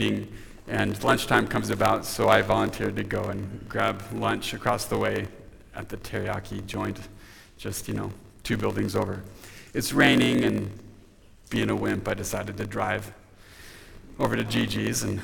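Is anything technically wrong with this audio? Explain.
Yes. A block size mismatch (padded) runs throughout: short blocks zero-padded to what fits a 1024-sample read leave gaps, producing a 46.9 Hz buzz and playback slowed to 0.938 speed at near-normal pitch.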